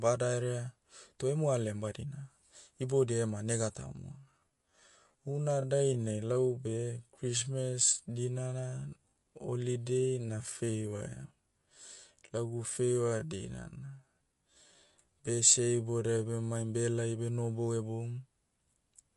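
It's a speech clip, and the whole thing carries MP3 compression damage you can plainly hear. The top end stops dead around 11.2 kHz, and there's that watery, swirly quality where weak frequency detail flickers in and out between frames, with s sounds going metallic and attacks smearing. That's likely an encoder starved of bits, which fits a low bitrate somewhere around 48 kbps. On top of that, from 3.83 s to 16.49 s there's a time-stretched section, ending just before "behelai beh nohobou". The pace drops to roughly 0.63 times normal speed while the pitch stays put, so the speech drags. That's likely software stretching the audio to fill a length by repeating short slices rather than resampling it.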